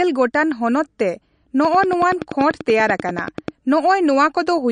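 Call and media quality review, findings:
MP3 compression throughout. Watery, swirly speech, nothing above 9.6 kHz. Likely a starved encoder dropping weak frequency lines, which fits a low bitrate near 40 kbps.

Train of clicks, 1.65 to 3.49 s. About twenty regular ticks at 10.4 per second, about 10 dB above the speech. Likely interference or a faulty connection injecting pulses.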